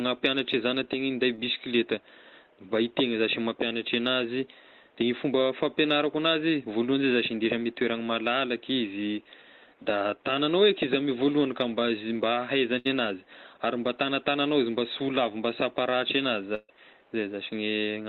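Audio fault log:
Audio fault log:
1.35–1.41 s, short concealed packet loss: about 20 ms never arrived and was bridged by extending the preceding sound, adding roughly 10 ms; a spectrogram shows a brief smeared, repeated slice.
12.78–12.87 s and 16.55–16.71 s, burst of packet loss: 60 ms, then 140 ms, lost and bridged by fading continuations, appearing as stretched, decaying sound; the second tapers into 20 ms of flat silence.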